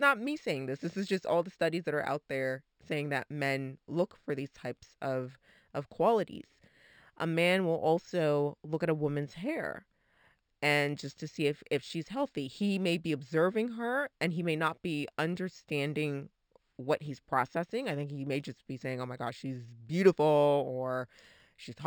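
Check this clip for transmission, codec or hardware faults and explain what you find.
One fault runs through the whole clip: imaging from linear upsampling. The sound appears to have been raised from a 12 kHz rate to 48 kHz by straight-line interpolation. This dulls the top of the band and leaves a faint mirrored copy between 6 and 12 kHz, roughly 30 dB down, heard as a light metallic shimmer on sibilants. Plain band-limiting would simply go dark above 6 kHz, without that shimmer.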